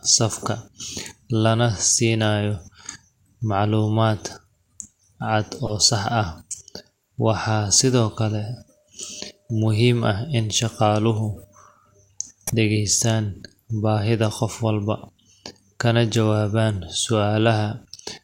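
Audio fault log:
5.64–5.74 s, 12.47–12.56 s, 15.23–15.25 s: corrupt frame decoded. Damaged compressed frames still got played, throwing energy into wrong frequencies. The first two are loud, around -10 dBFS; the last is faint, near -55 dBFS.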